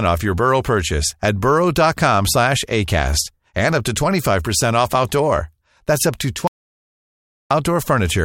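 Speech that cuts out abruptly after "up to" at 6.47 s, falling to silence with no room tone until 7.51 s: an audio dropout to silence, likely a lost input written as silence.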